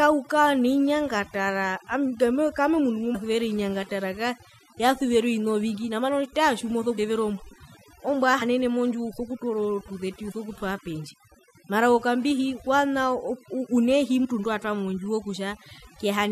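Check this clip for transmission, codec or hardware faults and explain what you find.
Two faults are present: heavy noise reduction across the whole speech recording, and four short dropouts where compressed frames were skipped.

Overdone noise removal runs throughout. The reduction was set so aggressively that any frequency band sitting near the estimated noise floor is pulled down or gated off, taking the quieter parts of the voice with it. The background collapses to near silence speckled with twinkling artefacts.

Compressed frames skipped occurs at 3.14, 6.97, 8.41 and 14.24 s. At each point the audio jumps forward, losing roughly 100 ms, 150 ms, 70 ms and 70 ms respectively. Those amounts are whole multiples of a frame length of about 23 ms, which points to entire codec frames being lost or rejected by the decoder.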